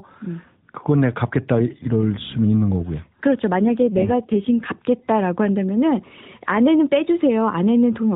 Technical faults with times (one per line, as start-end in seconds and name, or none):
3.58-4.72 AMR rate drop